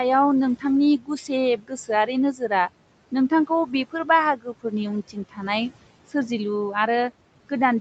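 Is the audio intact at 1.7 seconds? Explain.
No. Speech cut by the noise suppressor runs from 1.57 to 1.89 s. The suppressor mistook part of the speech for background noise and pulled it down along with the noise, by up to about 16 dB. Across roughly 150 ms of that span, sounds come out swallowed and faint.

Noise suppressor artifacts are also present at this moment, as throughout the clip. Frequency bands judged to be steady noise are lowered frame by frame, by about 18 dB. The noise sinks between the words and rises under them.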